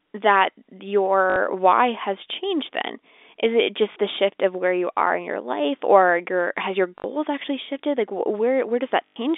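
At 1.30 to 1.36 s, just before "why has changed then", the speech stutters in a brief robotic buzz, and again at 3.92 to 3.96 s before "the shift of where", at 6.98 to 7.04 s between "or your has your" and "actually shifted", and at 9.07 to 9.16 s. This is packet loss with the last packet repeated. Each 40 to 100 ms gap is filled by replaying the same short chunk, giving a buzz that fits 20 ms packets. Silence or a smooth fade would point instead to a plain dropout. The band-limited G.711 telephone sound is heard throughout.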